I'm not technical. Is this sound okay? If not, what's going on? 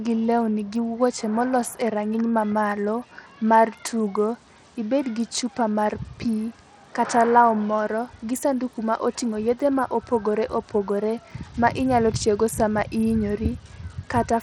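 No, the whole recording has a gritty, smeared edge, most likely from Bluetooth SBC compression squeezing the voice hard enough to roughen it and lose the crisp top end.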